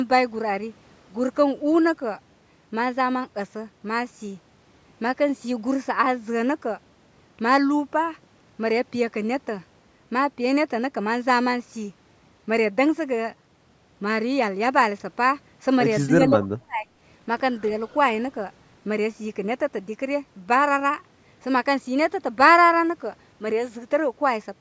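From 16.09 to 16.91 s the speech dips sharply, falling by roughly 30 dB at its deepest and losing about 0.7 s in total. This is speech suppressed in double talk, likely from an echo canceller that mistook both sides talking at once for echo and attenuated the near talker.

At 17.9 s, from 17.88 to 17.95 s, a brief, faint delayed copy of the speech appears about 275 ms behind the original and roughly 35 dB below it. This echo leak is likely residual loudspeaker pickup that the far end's canceller failed to remove.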